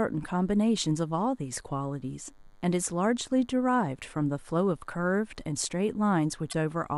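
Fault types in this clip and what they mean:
DECT cordless phone buzz: A thin, steady buzz at 100 Hz runs through the whole speech clip, rich in harmonics. It comes from a nearby DECT handset or base sending a radio burst every 10 ms, which the audio circuit rectifies. It sits far down, about 40 dB below the speech.
Damaged data in a compressed stream: Near the end, from 6.49 to 6.54 s, a brief glitch breaks into the speech. Corrupted bytes in the compressed stream made the decoder misread those frames. It lost sync and hunted for the next valid frame header.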